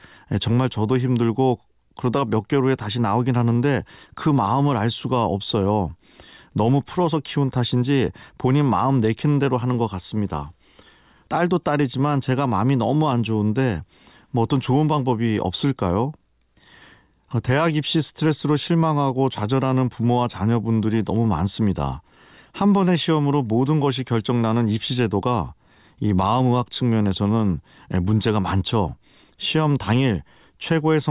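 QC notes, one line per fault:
No faults found.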